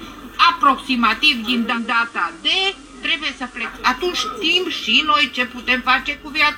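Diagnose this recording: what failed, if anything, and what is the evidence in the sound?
What failed is the radio receiver. At 1.66 s it loses the digital stream and does a digital radio blend to analogue, crossfading over about 130 ms to the FM broadcast of the same station, then switching back at 3.75 s. In between, hiss comes up to roughly 25 dB under the programme and the level drops about 5 dB. That's FM's noisier path taking over until the digital signal returns.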